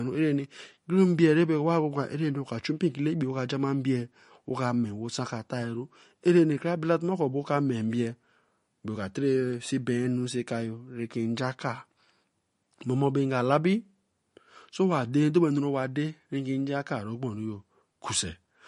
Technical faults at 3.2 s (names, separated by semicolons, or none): MP3 compression